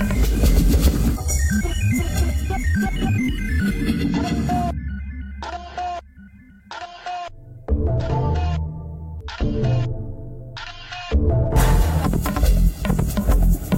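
No technical faults are audible.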